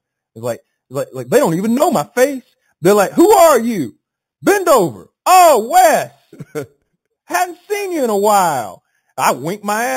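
Imaging from sample-and-hold upsampling runs through the whole speech clip. Each sample was simply repeated with no smoothing filter. The sound points to an 8 kHz original rate. Mirrored copies sit from 4 kHz to 8 kHz, about 16 dB below the speech. They give a metallic fizz that tracks the voice.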